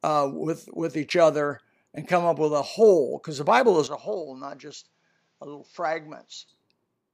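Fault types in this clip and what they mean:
Input switched to a poorer device: from 3.87 s to 6.48 s the speech turns duller and about 10 dB quieter, with nothing above 7.6 kHz and a faint new background hiss well below it, with no gap at the change. The likely cause is recording switching mid-clip to a narrower-band microphone.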